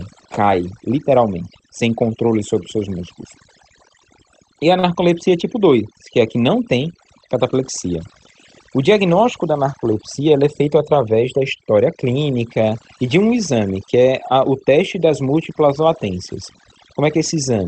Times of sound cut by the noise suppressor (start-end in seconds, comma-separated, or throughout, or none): none